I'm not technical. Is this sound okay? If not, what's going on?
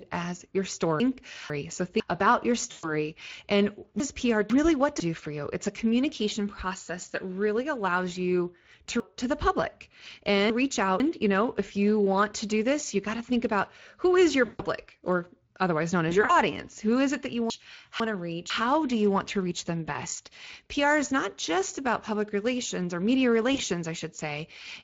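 No. All the way through, the speech sounds rough and hoarse. That is the Speex codec, an older voice-chat compression method that squeezes the voice so hard it can't carry all its natural detail.

At 1.0 to 2.0 s, 4.0 to 5.0 s, 9.0 to 11.0 s and 17.5 to 18.5 s, the speech briefly sounds jumbled. These are chunks out of order: half-second pieces of audio arrived late and were played after pieces meant to follow them, so the order is scrambled.

Around 2.71 s, 14.45 s, 16.09 to 16.34 s and 23.53 s, the voice briefly smears into a buzzy or noisy, fading sound. That is VoIP packet loss concealed by the speech codec. Bits of audio went missing in transit, and the receiving software filled the gaps by guessing from the last sound it had.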